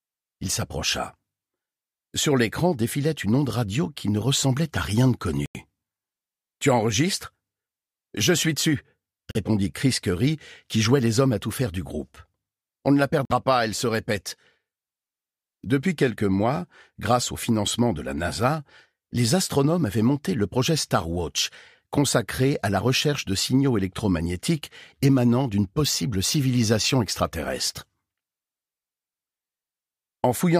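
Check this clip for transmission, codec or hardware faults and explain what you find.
Three short dropouts point to a Bluetooth stall. At 5.46 to 5.57 s, 9.31 to 9.37 s and 13.25 to 13.32 s, radio interference likely held back packets until the headphones' buffer ran empty. The sound cuts to silence for 91, 40 and 50 ms respectively, then continues once the resent data arrives.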